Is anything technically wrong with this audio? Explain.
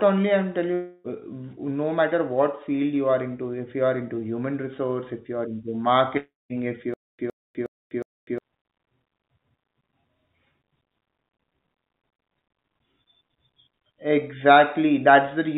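Yes. The speech has three faults, heard through a narrowband call path with nothing above 4 kHz, consistent with G.711.

Long network dropouts: from 0.74 to 1.07 s and again from 6.17 to 6.53 s, the sound smears into a fading buzz. The second one falls into silence for about 200 ms before the speech resumes. Roughly 0.3 s is skipped each time. Likely cause: packets stopped arriving, and the receiver extended the last audio to cover the gap.

Stutter with silent gaps: from 6.94 to 8.38 s, a 111.5 ms fragment plays four times, each followed by about 250 ms of digital silence, repeating every 361 ms. The audio that should fill this span is lost. This is likely a stalled stream replaying its last buffer at each retry.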